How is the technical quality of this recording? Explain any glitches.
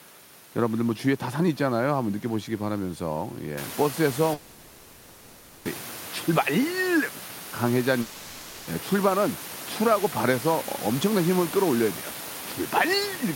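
The recording has two gaps where the speech is lost, with room noise rising near 3.5 s to sit about 14 dB below the voice.

The gaps run from 4.33 to 5.67 s and from 8.01 to 8.69 s, lasting 1.32 s and 0.66 s. Each sounds like a long network dropout, likely caused by audio failing to arrive. The receiver stretches the last sound into a fading buzz. Speech then resumes, and the missing part never returns.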